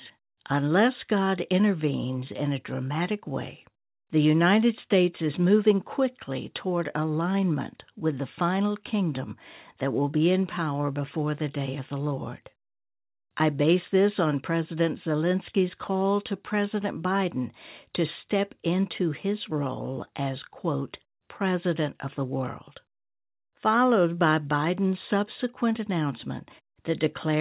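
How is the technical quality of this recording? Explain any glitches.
The technical quality of this recording is sound, with no glitches to explain.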